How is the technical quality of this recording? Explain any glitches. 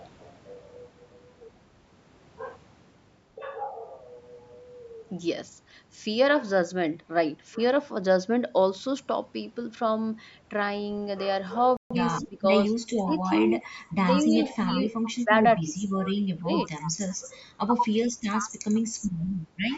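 The speech has several clear glitches in the second half, including a dropout, a rushed patch, repeated level dips and a faint echo.

Playback stall, 11.77 to 11.91 s: the speech stops dead for about 140 ms and then resumes. The likely cause is the player running out of data or its thread being blocked. On a waveform it appears as a flat gap, and on a spectrogram as a blank vertical band.

Time-compressed catch-up, 11.91 to 12.03 s: right after the gap, the speech plays at twice normal speed without any change in pitch. The player is shortening its backlog by splicing out small slices and cross-fading the joins. This produces a hurried stretch with compressed syllable spacing on a spectrogram.

Speech suppressed in double talk, at 12.27 to 12.70, 13.05 to 13.27, 13.60 to 13.72, 14.18 to 15.74, 16.43 to 16.51 and 17.21 to 17.34 s: the voice repeatedly dips by roughly 10 to 15 dB, and by about 25 dB in the long stretch. 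This is likely an echo canceller turning the talker down while the far side also spoke. It shows as sagging waveform envelopes.

Echo leak, 19.20 to 19.24 s: a very faint scrap of the voice returns about 140 ms late, far below the main speech. This likely comes from a loudspeaker echo that the far end's canceller failed to remove. It is barely visible as a weak, delayed ghost of the preceding harmonic pattern.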